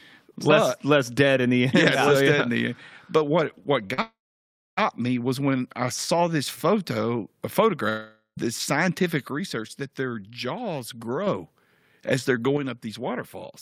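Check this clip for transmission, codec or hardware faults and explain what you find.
Three kinds of transmission fault are audible, all network or channel related.

Short concealed packet loss occurs at 3.87–3.92 s and 3.94–4.00 s. Packets missing for about 20 ms and 40 ms were filled by extending the preceding sound, giving a brief smear or wobble before normal audio resumes.

A long network dropout follows at 4.02–4.79 s, after "what what". The concealment buzz fades, about 0.63 s is plain silence, and the sound returns at "me was when I" with that stretch lost. A second gap at 7.89–8.39 s behaves the same way, leaving about 0.12 s of silence. Sustained packet loss is the likely cause.

One channel drops out from 9.31 to 11.27 s, after "this scientific", and again from 12.57 s to the end, after "as they're". The level of the centred material falls abruptly by about 6 dB, consistent with a stereo channel likely going missing before the mono sum.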